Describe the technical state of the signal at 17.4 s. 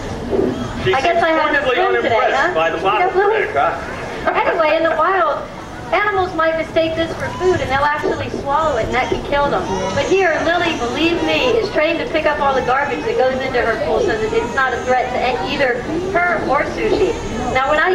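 At 17.4 s the signal is intact, with no technical fault present at that moment.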